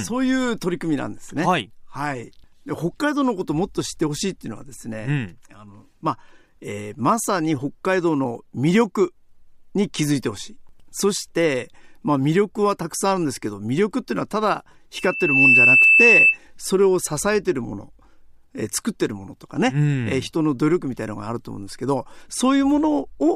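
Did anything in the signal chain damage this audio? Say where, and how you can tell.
Yes: a piercing 2.6 kHz tone swells over about half a second at 14.95 s and screams roughly 10 dB above the speech until 16.38 s. This is loudspeaker feedback squeal from the acoustic playback-to-microphone loop exceeding unity gain at that frequency.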